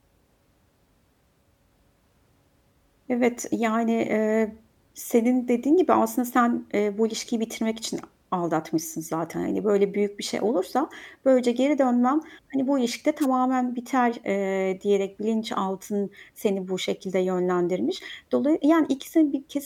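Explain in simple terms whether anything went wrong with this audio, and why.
Something went wrong with the radio link of a wireless microphone. At about 13.21 s the microphone's signal briefly faded, most likely because reflected copies of the radio wave arrived out of step and cancelled each other. With the signal that weak, the receiver's own hiss rose to fill the gap. The result is a wireless microphone noise hit: a quick swish of static, lasting only about 50 milliseconds until 13.26 s, laid over the speech.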